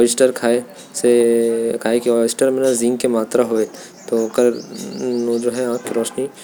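No technical faults are audible.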